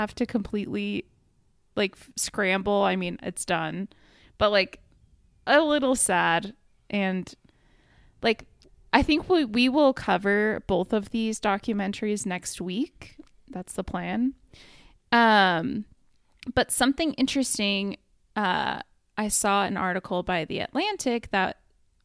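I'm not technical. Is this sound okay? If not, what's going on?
Yes, this speech recording sounds fine, with no technical problems to point out. Nothing drops out, crackles or jumps anywhere in it.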